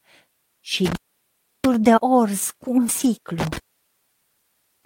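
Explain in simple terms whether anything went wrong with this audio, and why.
Something went wrong three times. First, an intermittent contact: a loose cable or plug briefly lost its connection. From 0.85 to 1.74 s the speech cuts out for about 0.69 s, with crackle where the line opens and closes and only faint hiss in between. It happens again from 3.39 s, just after "cu un", and that dropout runs to the end of the clip at 4.85 s, leaving about 1.28 s of near-silence with crackle at its start.

Just before that, at 2.99 to 3.05 s, also right after "cu un", there is a lost packet rebuilt from error correction. A small piece of the data stream went missing in transit, which suggests a couple of lost packets. The packets that followed carried backup copies of that data, so the receiving end filled in about 40 ms of sound rather than leaving a gap. Those backup copies are lower quality, so that brief stretch sounds rougher and noisier than the speech around it.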